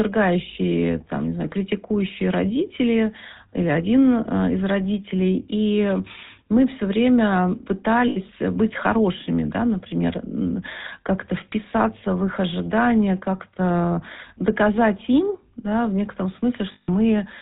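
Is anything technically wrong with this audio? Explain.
Yes. The whole clip has gone through the GSM full-rate codec, and the damage is plainly audible. The codec models the vocal tract and excites it with a sparse pulse train. That gives speech a buzzy, gravelly edge. Nothing comes through above 4 kHz, which fits a 13 kbps full-rate coder.

There are also lost GSM frames at 8.08–8.17 s and 16.72–16.89 s, lasting about 80 ms and 160 ms. The decoder keeps repeating the last good frame, so the sound hangs as a rough, metallic ring.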